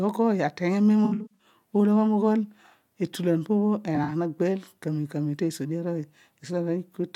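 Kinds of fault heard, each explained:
AAC frame loss with concealment: missing frames rebuilt from the last good spectrum, giving smeared patches at 1.05–1.47 s and 3.95–4.10 s, seen as blurred spectrogram bands.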